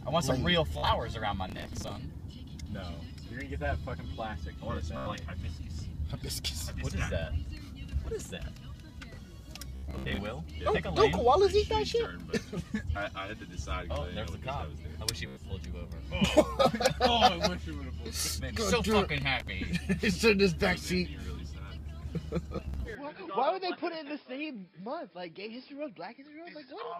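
Bluetooth stutter first appears at 0.73 to 0.90 s. Audio packets arrived late or not at all, so the receiver kept replaying its last slice of sound until fresh data came. The result is a brief buzzing, machine-gun repetition, after which the audio resumes further along. The first burst loses roughly 90 ms of audio, spread over about 150 ms.

Processor overload crackle follows at 1.49 to 1.96 s. The processor could not finish its short audio buffers on time, which fits buffers of around 5 ms, and it missed about twenty deadlines over the stretch. Each miss refills the gap with a fragment of old audio cut with hard edges. Together they form a gritty, tearing crackle laid over the sound, which stops once the load eases.

Bluetooth stutter returns at 4.97 to 5.08 s. The longest episode is at 9.76 to 10.21 s, where nearly 300 ms goes missing and the longest unbroken run of repeats lasts about 76 ms. 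A shorter one follows at 15.27 to 15.42 s.

Processor overload crackle recurs at 19.18 to 19.48 s as a shorter burst of only a handful of missed buffers.

Bluetooth stutter strikes once more at 22.57 to 22.84 s, losing about 120 ms over roughly 240 ms.

An input switched to a poorer device is the likely cause of the change at 22.95 s, which lasts to the end. There is no gap at the switch. The sound instantly turns dull and boxy, with nothing above 5.2 kHz. The level drops by about 10 dB, and a new background noise appears well below the signal.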